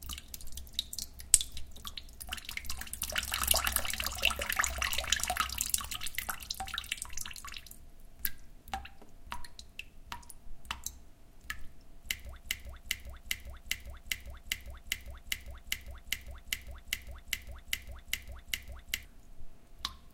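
From 12.4 s to 19.05 s, a 0.40 s fragment repeats 17 times back to back, a broken-record loop, likely from a stalled player or stream resending its last buffer.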